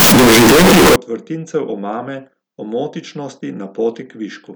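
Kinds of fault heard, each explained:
Float read as integer: from the start to about 0.96 s, just before "vrtincev omame omotičnosti", the speech turns into a blaring, near-square wall at an almost fixed, high level, noise as loud as speech, though pitch survives. Likely 32-bit float samples being read as 32-bit integers.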